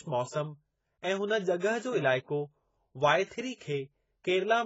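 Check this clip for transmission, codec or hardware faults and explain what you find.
One codec fault runs through the whole speech clip. The sound is dull and smeared, with nothing above 7.6 kHz, and the sibilants and held vowels have a fizzy, warbling texture. This is likely AAC compression at a heavy setting. AAC-LC splits each frame into frequency lines and spends too few bits on them here, so it drops the top band and coarsely fills or leaves gaps in the rest, which fits a bitrate around 16 kbps.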